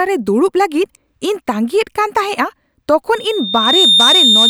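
Loudspeaker feedback squeal begins at 3.14 s and runs to the end of the clip. The microphone is picking up the loudspeaker it drives, and at 3.6 kHz the loop gain climbs past unity, so that frequency reinforces itself on every pass. Over roughly three quarters of a second a thin, piercing tone swells up beneath the speech until it sits about 5 dB above it, a steady high whistle that nothing in the clip cuts off.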